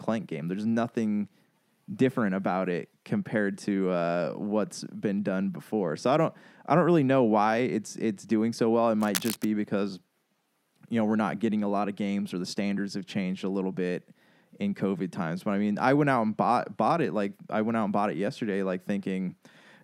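A speech recording with a burst of cable scratch noise from 9.00 to 9.50 s: a half-second of harsh, uneven crackling and rustling laid over the voice, roughly 10 dB below the speech level. The likely cause is a worn cable or connector being moved, its contact flickering. On a spectrogram it appears as dense, broadband vertical streaks; the waveform shows ragged, spiky bursts riding on the speech envelope.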